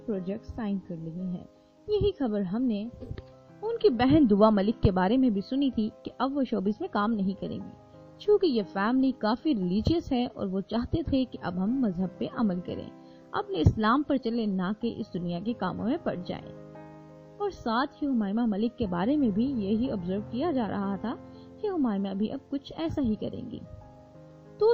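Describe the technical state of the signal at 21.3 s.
No fault appears at 21.3 s, and the signal is intact at that point.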